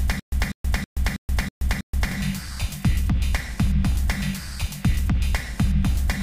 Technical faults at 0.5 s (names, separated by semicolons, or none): stutter with silent gaps